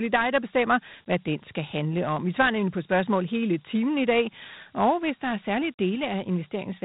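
Dialogic VOX ADPCM coding runs through the whole speech clip. The speech has been squeezed into 4-bit adaptive steps, which fits a 32 kbps telephony VOX file, so a gritty hiss clings to the speech and nothing remains above about 3.9 kHz.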